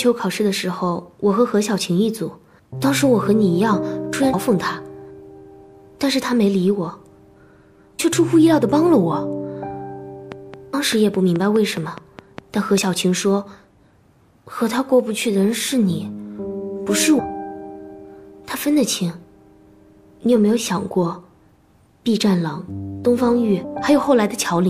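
The audio has two faults: compressed frames skipped, and a train of clicks. At 4.33, 7.98, 10.73, 17.18 and 23.63 s, whole 26.1 ms codec frames drop out, jumping ahead roughly 150, 400, 200, 200 and 400 ms. Each join is a short smeared blip, visible as a brief vertical smudge and a discontinuity in the waveform. From 10.32 to 12.79 s, about fifteen evenly spaced clicks arrive at 4.83 per second, peaking roughly 10 dB above the signal. They show as thin full-band vertical lines and sharp spikes, likely from electrical interference or a faulty connection.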